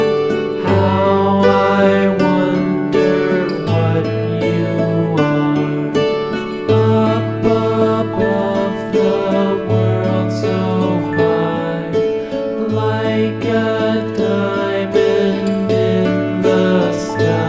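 No technical faults can be heard anywhere in the recording.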